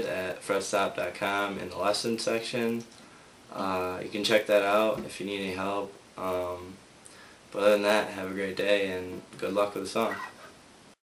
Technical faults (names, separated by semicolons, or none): resampler restarted on every block